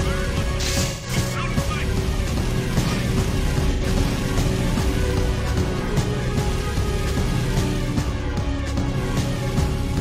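At 0.86 s, AAC frame loss with concealment sets in until 1.10 s. About 170 ms of data went missing, which fits four lost frames. The decoder patched the gap from the last good spectrum. The result is a short smeared, noisy patch.

From 2.71 s a doubled audio track appears. A full-band copy of the sound trails about a second behind, a few dB quieter. It has no decay or room colour. It likely comes from a second, slower capture path. It starts abruptly.

At 3.72 s, during the doubling, AAC frame loss strikes again, lasting to 3.83 s. About 85 ms is lost, which fits two frames. It gives a brief phasey smear.

At 6.29 s the delayed copy cuts off abruptly.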